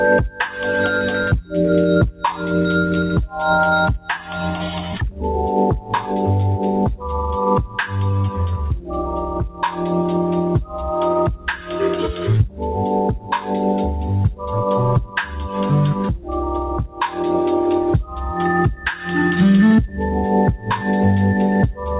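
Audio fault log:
Throughout: noise suppressor applied to music or sounds. A speech-tuned suppressor stays active on non-speech material, treating sustained tones, ambience and reverb as noise. Level swings by around 10 dB as it engages and releases, so the sound pumps and thins while attacks pass intact. On a waveform the envelope breathes unevenly; a spectrogram shows held partials and decaying tails fading early, with narrow-band content above about 4 kHz absent, which fits G.711 mu-law at 64 kbps.
1.42 to 2.24 s, 3.99 to 7.78 s, 8.79 to 20.68 s: sound cut by the noise suppressor. Within these spans, steady or fading sounds are judged to be noise and pulled down by up to about 12 dB, roughly a fifth of a second in the first, under a second in the second and about three seconds across the long third span. Decays are truncated while onsets survive. The waveform shows tails collapsing abruptly after transients; the spectrogram shows sustained energy dimming in patches.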